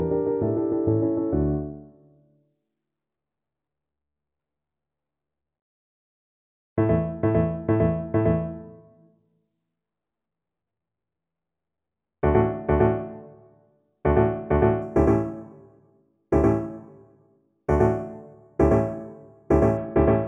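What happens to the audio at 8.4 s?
Nothing goes wrong at 8.4 s; the audio plays through that moment intact, with no dropout, click, glitch or other fault.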